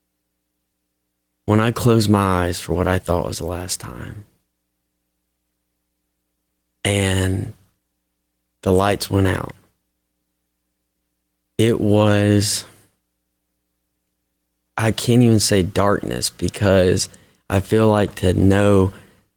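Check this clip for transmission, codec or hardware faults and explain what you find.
Nothing faulty can be heard anywhere in this speech.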